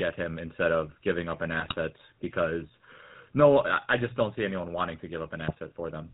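The speech passes through the GSM full-rate codec from start to finish. The coder rebuilds the voice from a vocal-tract model driven by sparse, regularly spaced pulses and discards everything above 4 kHz, so the voice sounds plainly buzzy, gravelly and muffled. This fits a 13 kbps full-rate link.

GSM bit errors follow. From 1.60 to 1.75 s, after "of giving up an", and again from 5.48 to 5.58 s, after "see anyone wanting to", corrupted filter, pitch and gain values reach the decoder. It mis-shapes those frames, and the voice breaks into brief squawks and gargling.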